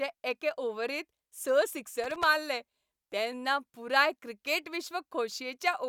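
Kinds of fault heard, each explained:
Loose connector crackle: a worn contact making and breaking chops the speech into an irregular scratchy burst from 2.04 to 2.23 s, just before "मारले तेन्ना पुराय क्रिकेट".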